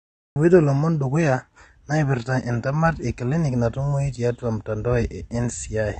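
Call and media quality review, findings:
Cut-off start, 0 to 0.36 s: digital silence, then speech enters abruptly at 0.36 s partway through a sound, with no attack or fade-in. The capture or stream opened late, so the first audible frame lands mid-utterance and the opening of that sound is missing. Probable component: recording start or stream join timing, not the talker.

AAC compression, throughout: dull, smeared speech with plainly audible codec damage. The band stops hard at 9.6 kHz, with nothing above it. Sibilants and sustained vowels have a fizzy, warbling texture from coarse spectral quantisation and band holes. This is likely an AAC-LC encode at a low bitrate, fitting around 32 kbps, where the encoder drops the cut-off and starves upper bands of bits.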